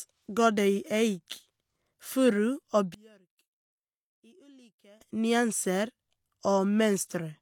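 One channel inverted, from 2.94 to 5.01 s, makes this speech recording almost disappear: heard in mono, the level drops by about 31 dB, leaving only a faint residue until the signal returns to full strength. The likely cause is reversed polarity on one stereo channel, so the speech, identical in both sides, cancels when they are combined, and only the small differences between the channels survive.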